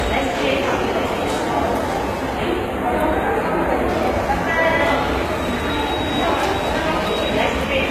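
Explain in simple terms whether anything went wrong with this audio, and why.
A couple of things went wrong here.

From start to finish the audio has a rough, over-compressed quality, and nothing comes through above about 14.9 kHz, so the top end feels closed in. That mix of two different kinds of roughness most likely comes from transcoding between lossy codecs: the sound was squeezed by one compressed format and then squeezed again by another. The second pass wastes effort on the first one's flaws and adds its own, and the lowest top-end cut-off along the way never comes back.

Then, from about 2.37 to 3.89 s, the sound briefly turns hollow and phasey, a bit like hearing it through a tube. That's channel delay (comb filtering). One side arrives a tiny fraction of a millisecond late, a few samples or so. When both sides are mixed together, some frequencies cancel out at regular steps, the first dip landing somewhere around 5 kHz. 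That carves fixed gaps into the tone, which is why it suddenly sounds thin and odd for that stretch.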